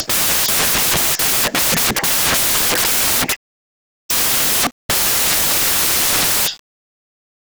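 From the first moment to the end, the speech is turned into loud, harsh hiss. This is the fault of samples built from the wrong bytes. Each sample's bytes are combined incorrectly, through a byte offset, swapped order or wrong alignment. The rapidly changing low bits end up as the dominant part of every value. The result sounds like broadband white noise at high level.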